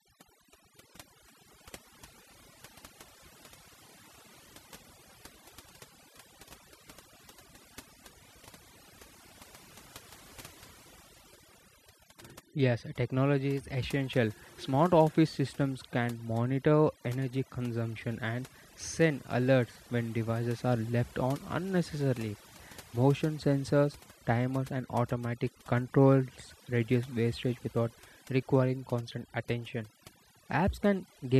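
From start to finish, overdone noise removal: the noise reduction was set far too aggressively, so frequency bands close to its noise estimate are pulled down or shut off, taking quieter speech detail too. Gaps fall to near silence with twinkling specks.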